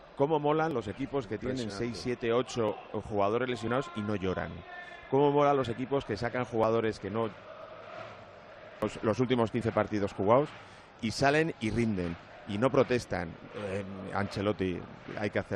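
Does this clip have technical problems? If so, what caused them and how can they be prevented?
Yes. There are brief clicks or tiny skips at 0.71, 2.69, 3.68, 5.64, 6.64, 7.62 and 9.61 seconds. This is overlap between stream segments. The audio arrives in one-second segments whose timestamps overlap. The player trims the overlap, removing 5 to 10 milliseconds of sound that was never actually duplicated. The waveform jumps at each cut, and the faults fall near whole-second spacing because the segments are one second long. To prevent this, generate segment timestamps from a continuous sample count so segment boundaries meet exactly.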